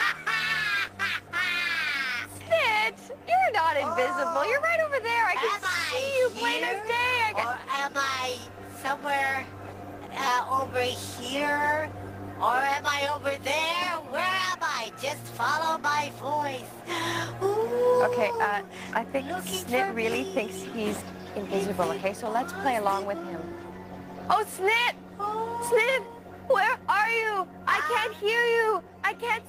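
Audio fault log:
No audible faults found.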